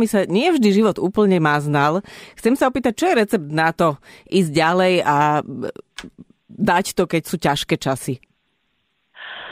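No technical faults can be heard anywhere in the recording. The speech continues without any break, interruption or alteration that would point to a problem in capture or playback.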